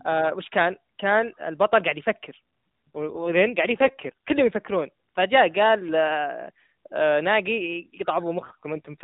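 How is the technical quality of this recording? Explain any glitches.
The recording is narrowband mobile speech from the AMR narrowband codec, with nothing above 4 kHz, and it has two stretches of audibly rougher sound.

AMR rate drop, from 2.88 to 4.82 s and from 8.34 s to the end: the voice turns buzzier and more synthetic, which points to the codec stepping down from 12.2 to 5.9 kbps on a weak link. Unlike packet loss, there is no gap, and the bandwidth stays the same.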